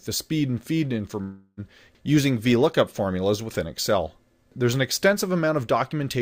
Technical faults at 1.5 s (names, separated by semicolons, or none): long network dropout